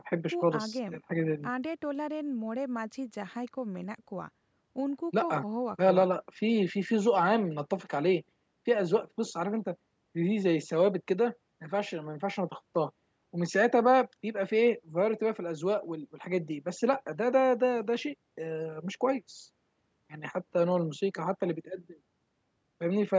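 There are no technical faults to describe in time order; the speech carries only the ordinary call microphone processing, with its trimmed low bass and nothing above 8 kHz.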